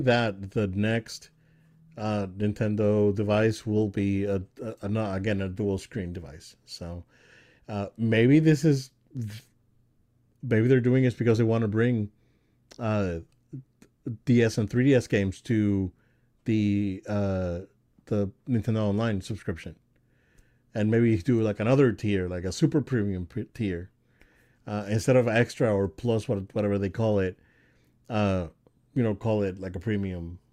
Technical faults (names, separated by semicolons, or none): adaptive stream starting at a low bitrate